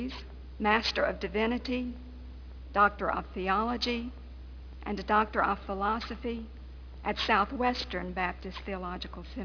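Aliasing runs through the whole clip. The sample rate appears to have dropped to about 11 kHz with no anti-alias filter. Everything above the 5.5 kHz fold point reflects back down as false, unrelated tones. These sit fairly high in level. Sibilant and bright sounds turn gritty and metallic.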